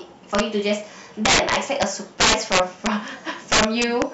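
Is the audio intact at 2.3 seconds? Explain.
No. From 2.20 to 2.87 s the speech suffers integer overflow: the signal was pushed about 9 dB past the top of the integer range, and instead of being held at the limit, each peak that crossed it wrapped around to the opposite extreme. Every loud crest therefore jumps across the full scale in a single sample, producing violent cracks on the louder parts of the speech, far harsher and more abrupt than ordinary clipping.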